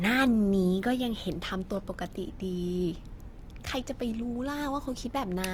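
A short speech clip with plainly audible Opus compression from start to finish: the voice comes across grainy and rough rather than swirly, as the codec fills starved bands with folded or noise-like content, likely from a low bitrate near 24 kbps, with the top still reaching about 20.2 kHz.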